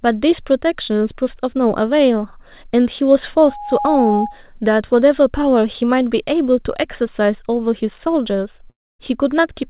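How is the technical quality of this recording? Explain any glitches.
The recording has two clear glitches. The sound stops above 4 kHz throughout, which fits a telephone-grade G.711 call codec.

Loudspeaker feedback squeal, 3.42 to 4.41 s. An 826 Hz tone swells over about 0.4 s to roughly speech level. The microphone re-amplified its own loudspeaker output.

Long network dropout, 8.70 to 9.01 s. The last sound smears into a fading buzz, then silence. About 0.3 s of audio was likely lost in transit.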